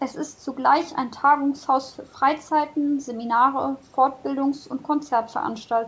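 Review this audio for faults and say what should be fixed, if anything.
Nothing here needs fixing: the speech tops out around 8 kHz, which is just what you'd expect from a wideband call path like G.722, and there's no fault to chase.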